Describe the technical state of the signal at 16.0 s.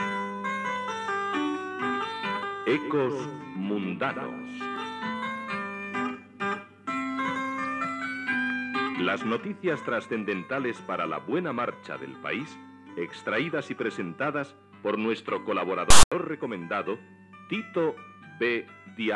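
A harsh, loud rasp with abrupt edges cuts in from 15.90 to 16.12 s, lopsided toward one side and then dropping to dead silence. This is file tags played as audio: a block of text tags and the zero padding after it were decoded as samples.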